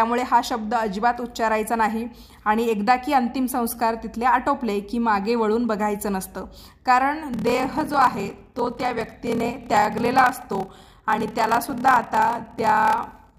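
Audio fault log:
7.31–13.39 s, block size mismatch (padded): 1024-sample writes, shorter than the blocks read, are zero-padded, giving a 38.3 Hz buzz and 0.889× speed with the timbre kept.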